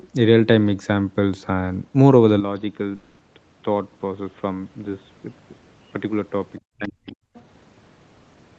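A speech recording whose sound turns abruptly duller and boxier at 2.40 s and stays that way to the end, with no gap at the change. The level falls by about 5 dB, and a new background noise appears roughly 45 dB below the speech, which points to the input likely having switched to a poorer device with a narrower band and its own noise floor. From 2.95 to 3.22 s the sound stops and is replaced by a smeared, fading continuation of the last sound for about 240 ms, after which speech resumes with that stretch missing, likely a long network dropout that the receiver covered by extending the preceding audio. Between 6.76 and 7.14 s the speech dips sharply, by as much as about 30 dB, across roughly 300 ms, likely speech suppressed in double talk: the echo canceller turned everything down while both sides spoke. Faint scraps of a second voice, about 30 dB below the speech, come through at 7.07 to 7.12 s and 7.34 to 7.42 s, likely the other side's voice leaking through from a loudspeaker that the echo canceller did not fully remove.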